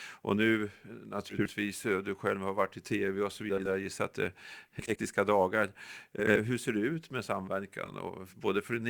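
Throughout the recording the converter's sampling clock wanders by a few microseconds, a sign of sample clock jitter, so each sample is taken slightly off its proper instant. The timing error matters most where the waveform changes fastest, leaving a fine hiss and roughness around 30 dB below the speech that swells on loud, bright syllables and falls away in pauses.

Frames out of order occurs five times: at 1.29–1.50 s, ending just before "du själv har varit"; at 3.50–3.68 s, between "i tv och så" and "jag gissar att det"; at 4.79–4.98 s, after "gissar att det är"; at 6.19–6.37 s; and at 7.85–7.94 s. In each case two adjacent blocks of coded audio were decoded in swapped order. The first four swaps exchange two blocks of about 80 ms each, and the last exchanges two blocks of about 40 ms, which fits runs of four frames and then two. Each spot becomes a brief garbled flutter, and the timing stays intact.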